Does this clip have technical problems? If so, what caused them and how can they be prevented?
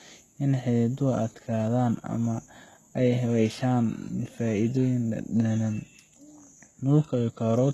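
Yes. Throughout the speech, the treble sounds artificial. S sounds come out gritty, metallic and lispy. Nothing remains above 12.3 kHz. The likely cause is heavy HE-AAC compression at a very low bitrate, around 16 kbps, which rebuilds the highs from copied lower bands whose harmonics do not line up. Encoding at a higher bitrate with plain AAC or Opus would prevent it.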